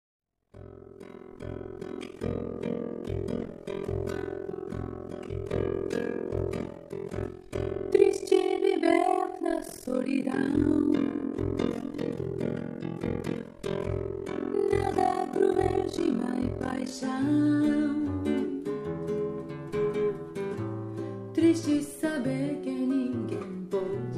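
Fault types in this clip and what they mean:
Overlap-add ripple: the audio was split into windowed frames and rejoined with overlaps whose gains don't sum evenly, so the level sinks once per frame, around 40 times a second, with swings of about 60 dB from 0 to 16.93 s. This gives a harsh, rough flutter. The waveform shows a regularly notched, comb-like envelope, and a spectrogram shows evenly spaced vertical stripes of near-silence running across all frequencies.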